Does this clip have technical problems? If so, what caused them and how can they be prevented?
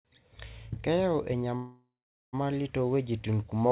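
Yes. From 1.56 to 2.35 s there is a call audio freeze, likely caused by packets stalling in the network until the jitter buffer ran dry. The last sound is stretched into a fading buzz, then about 460 ms of silence. Speech resumes where it stopped, so nothing is lost, but everything after arrives about 770 ms late. On a waveform this shows as a decaying smear then a flat line; a spectrogram shows smeared bands fading to blank, capped at 4 kHz by the G.711 call path. A more stable network link and a jitter buffer that adapts to delay spikes would prevent this.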